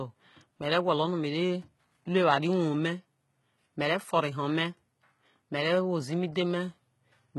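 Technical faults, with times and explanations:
Throughout, HE-AAC compression: the speech was likely coded at a very low rate, consistent with about 16 kbps, with treble rebuilt from copied lower bands and nothing above 11.8 kHz, so s sounds come out gritty, metallic and lispy, and the damage is heavy.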